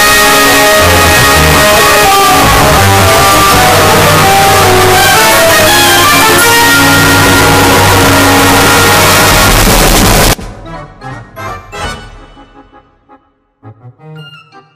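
From 0 to 10.33 s the audio is very loud and harsh. The waveform sits at an almost fixed, high level, almost square. Background noise is as loud as the main sound. This is float read as integer, likely 32-bit float samples decoded as 32-bit integers.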